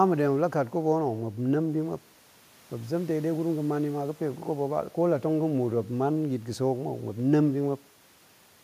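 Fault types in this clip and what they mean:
No technical faults can be heard in the speech, so there are no fault types to list for this clip.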